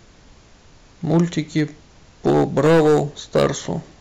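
Hard clipping hits twice: a light crackle from 1.1 to 1.62 s, about 4 dB over, then harsh fuzz from 2.26 to 3.46 s, about 11 dB over, with the speech peaks sheared flat.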